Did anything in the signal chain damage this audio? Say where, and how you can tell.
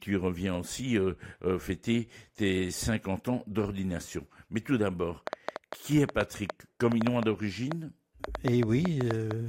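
Yes: a train of clicks from 5.27 to 9.32 s, after "tout d'abord". About twenty similar pops at roughly 5 per second, irregularly spaced and about 15 dB above the speech, likely from interference in the analogue wiring.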